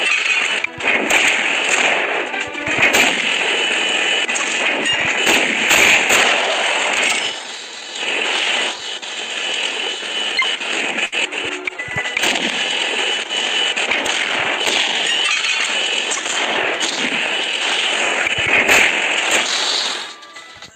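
A burst of packet loss hits from 11.05 to 11.15 s: a short run of packets never arrived in time, so the receiver stretched the last sound for about 66 ms while fading it, then resumed with roughly 60 ms of audio skipped.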